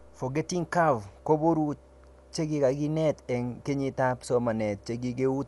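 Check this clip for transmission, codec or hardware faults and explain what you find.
One codec fault runs through the whole recording: Dolby Digital compression, likely at a low rate. The speech has nothing above about 11.4 kHz, sounding dull, with a plainly audible rough, fluttering noise where the encoder gave spectral lines no bits and the decoder filled them with dither, which fits a 64 kbps stream. The noise-filled texture sets it apart from a simple low-pass filter.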